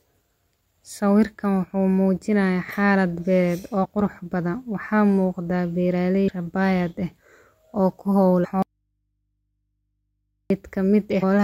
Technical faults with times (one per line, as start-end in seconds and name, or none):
3.83-3.86 damaged data in a compressed stream
6.27 damaged data in a compressed stream
8.43-8.45 damaged data in a compressed stream
8.62-10.50 audio dropout to a faint residue
11.22 damaged data in a compressed stream